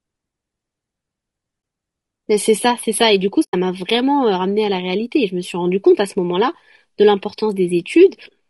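A speech clip whose voice sounds rough and grainy throughout, with noise filling the gaps between harmonics and a thin, somewhat synthetic top end. This is the sound of low-delay AAC compression, likely AAC-ELD at a low rate consistent with around 32 kbps, whose short frames resolve pitch harmonics poorly. Two dropouts appear, a brief dip from 1.61 to 1.63 s (20 ms) and a longer, soft-edged hole from 3.43 to 3.54 s (100 ms). Both are AAC frame loss with muting, where the decoder zeroed the missing frames and the overlapping windows faded the sound out and back in, about one frame's worth at the first gap and several consecutive frames at the second.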